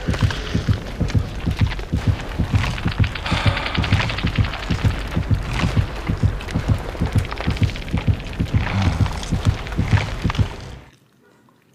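Nothing goes wrong here: there's no dropout, glitch or distortion to point to at any moment, so there's simply no fault to describe.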